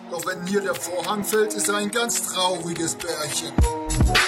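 At 1.64 s the audio abruptly loses its top end and stays that way right through to the end, which is the classic sign of an adaptive stream at a lower bitrate. There's no gap at the switch, just a sudden step down: nothing survives above 13.5 kHz, and the codec artefacts get noticeably thicker. That fits the player dropping from an AAC stream around 96 kbit/s to one around 32 kbit/s when the connection slowed.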